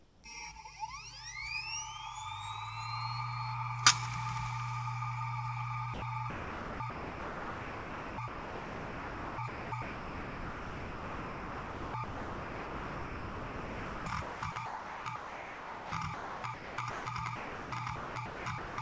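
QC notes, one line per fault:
0.00–0.24 s: comfort noise in place of the background. The opening quarter second carries a steady, featureless hiss instead of the real background, sitting about 1 dB off its level. This is likely discontinuous transmission: the sender stopped during the pause and the receiver synthesised shaped noise to fill it.
5.94 s: sound dropped by the voice detector. An 80 ms piece of the sound vanishes into flat, even noise before returning. The sender's voice detector likely judged this stretch to be background and stopped sending, so the receiver substituted comfort noise for the lost sound.
6.30–17.06 s and 17.36–18.78 s: sound chopped by the voice detector. Across these runs the sound keeps breaking up, with about 9.4 s and about 1 s respectively given over to synthetic noise. Likely the voice detector toggled repeatedly between sending and silence, cutting quieter parts.
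Throughout, the call path limits content to below 8 kHz, consistent with a G.722 codec at 64 kbps.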